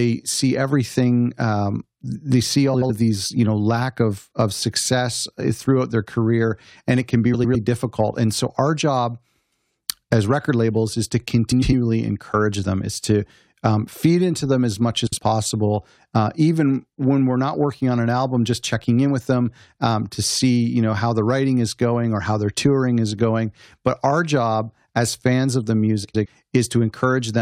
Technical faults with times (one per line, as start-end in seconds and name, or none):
2.74-2.90 frames out of order
7.33-7.56 frames out of order
11.51-11.74 frames out of order
15.07-15.18 frames out of order
26.04-26.26 frames out of order